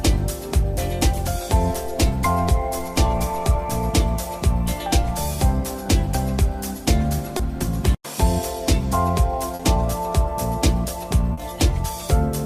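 Three brief smears, each a short wobble where the sound briefly blurs, come at 7.37 s, 9.55 s and 11.33 s. These are short concealed packet losses: about 20 ms, then 40 ms and 40 ms, of audio never arrived, so the receiver extended the preceding sound before blending back.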